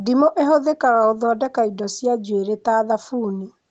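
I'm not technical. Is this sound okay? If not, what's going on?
Yes, this sound is okay, with nothing going wrong in it.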